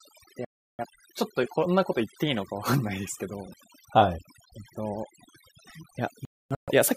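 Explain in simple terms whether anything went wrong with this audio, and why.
Two things went wrong. First, overdone noise removal: a noise reduction tool was set far too strong on this speech. Whenever a slice of the sound looked too much like background noise, the tool turned that slice down hard or shut it off, taking quiet parts of the voice with it. Throughout the clip, the background drops and breaks up into twinkling, warbling specks.

Second, there are two digital broadcast dropouts, where the receiver stopped getting usable data and muted itself until good data returned. From 0.45 to 0.85 s the sound cuts out for about a third of a second. From 6.25 to 6.72 s it breaks up again, this time as several short holes spread over about half a second, the longest about a quarter of a second. Whatever was said during those gaps is simply gone.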